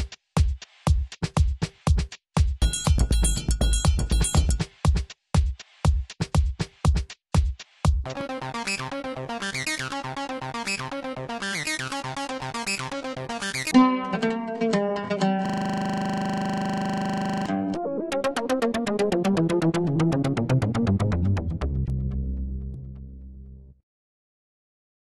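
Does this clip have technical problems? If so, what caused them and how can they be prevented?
Yes. From 15.46 s to 17.46 s there is a system hang loop: the playback or recording system stalled while the audio hardware kept replaying the same 40 ms ring buffer, repeating it 50 times as a 25 Hz rattle. On a waveform, identical 40 ms blocks tile the span; a spectrogram shows a regular vertical banding every 40 ms and fine harmonic lines spaced 25 Hz apart. It can be prevented by keeping the audio thread real-time and adding a watchdog that mutes output when buffers stop refreshing.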